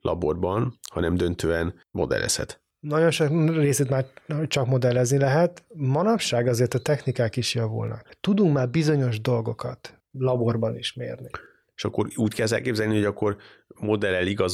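Clock drift buffer slips recur every 1.69 s from 1.12 s to 12.94 s, after "laborban hanem" until "hogy akkor": about seven small clicks, likely from mismatched device clocks dropping or repeating a few samples.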